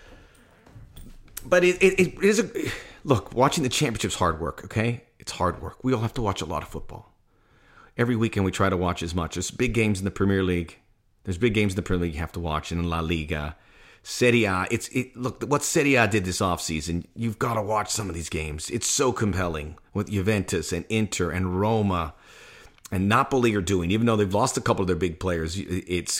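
No audible technical fault occurs anywhere in the recording.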